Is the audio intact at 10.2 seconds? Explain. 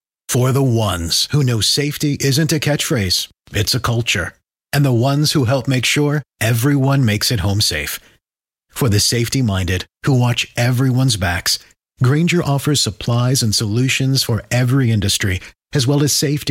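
Yes, the speech at 10.2 seconds plays through intact, with no audible fault at that moment.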